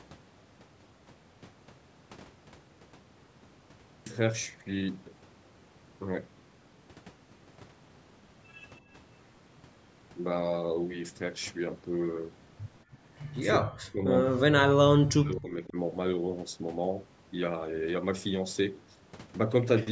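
Speech recorded through call microphone processing, with nothing above 8 kHz, shows speech suppressed in double talk twice: from 13.65 to 14.1 s and from 14.28 to 15.77 s, together about two seconds. In each, the talker's level sinks by about 40 dB at its deepest. The likely cause is an echo canceller failing to separate the near-end talker from loudspeaker echo of simultaneous far-end talk and attenuating the near-end talker along with it.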